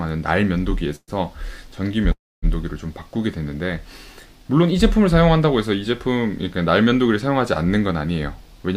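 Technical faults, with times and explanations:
0.96–1.11 s and 2.12–2.46 s, call audio freeze: the sound stalls into a fading buzz, then silence (about 40 ms, then 250 ms), and resumes where it stopped, likely from late packets draining the jitter buffer. Unlike packet loss, nothing is skipped; playback just falls 122 ms and then 308 ms further behind.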